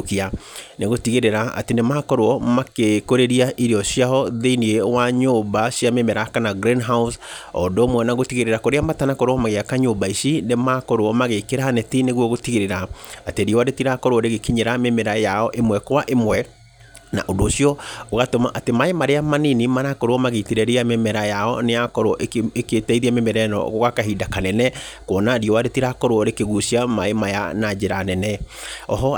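Listening to the speech recording, nothing technical stood out at any point.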